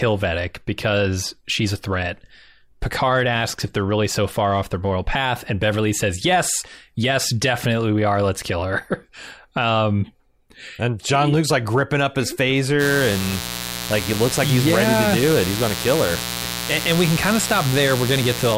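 Mains buzz enters at 12.78 s, right after "like gripping up his", and continues to the end of the clip. Sharp switching spikes are leaking into the signal path twice per cycle of the 60 Hz mains, stacking up harmonics of 60 Hz that extend well into the kilohertz range. The result is a steady, raspy buzz sitting roughly 10 dB below the speech.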